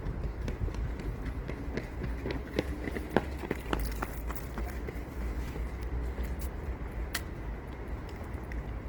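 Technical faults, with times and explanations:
Throughout: Opus compression is the likely cause of the grainy, rough texture, with tonal parts turned noisy. Unlike MP3's swirling holes, content reaches about 20.3 kHz, but bands short of bits are filled with noise or folded copies, fitting a CELT-mode rate near 16 kbps.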